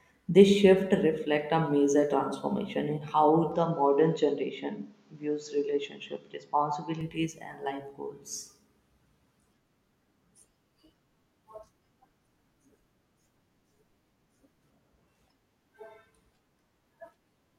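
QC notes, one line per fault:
3.52–7.01 s, input switched to a poorer device: the sound turns duller, then clears again, with no gap and little level change, and a faint new background noise sits well below it. A spectrogram shows everything above 7.6 kHz cut flat across this span, likely from a narrower-band microphone.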